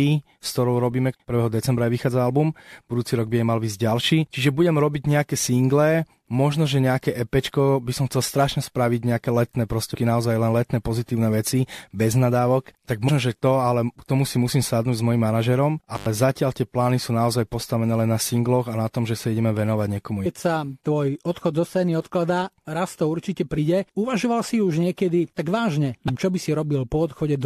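Short chirps and blips, at 9.94 s, 13.08 to 13.10 s, 20.25 s just before "sa tvoj odchod zo", 23.57 s just after "odkladá raz to určite", and 26.08 to 26.10 s, come from damaged data in a compressed stream. The decoder misreads the corrupted frames and resynchronises at the next one. Between 15.95 and 16.06 s the speech drops out for 92 ms with crackle on either side and faint hiss in the gap, just before "zatiaľ tie plány sú". This is an intermittent contact, where a loose connection briefly opens the signal path.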